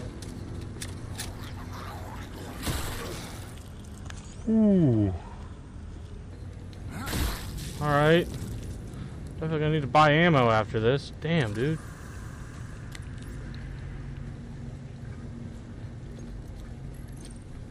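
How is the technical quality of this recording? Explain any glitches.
One section runs at the wrong speed. From 3.54 to 6.30 s the sound drops and drags: everything turns deeper and slower at once, sitting about three semitones below the surrounding audio, then snaps back to normal pitch and pace. That passage plays at 0.827 times its original speed, so timing stretches and pitch falls together. The likely cause is an editor or player running that stretch against the wrong clock rate.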